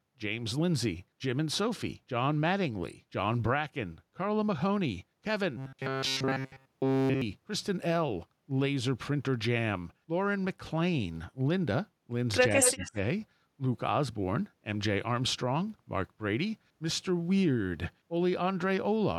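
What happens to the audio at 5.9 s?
At 5.9 s the speech is inside a stretch of robotic sound from repeated short buffers, running from 5.57 to 7.22 s. Through that span the voice becomes a rigid, metallic buzz at about 134 Hz that loosely tracks the words. The likely cause is audio arriving too infrequently, so the playback side loops the most recent fragment of roughly 7.5 ms over and over while fresh audio is dropped, and essentially the whole span is made of these repeats.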